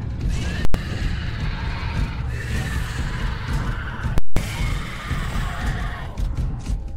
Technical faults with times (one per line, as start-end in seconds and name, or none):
0.65-0.74 invalid numbers at full scale
4.18-4.37 invalid numbers at full scale